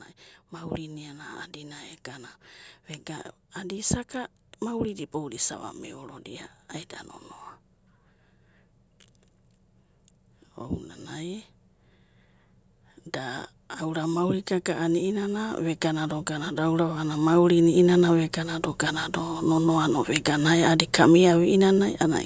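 A speech clip in which, from 13.24 s to 20.38 s, the voice and the background noise swell up together, ending about 13 dB louder. That slow, shared rise is automatic gain rising: the call's gain control judged the input too quiet and kept turning it up.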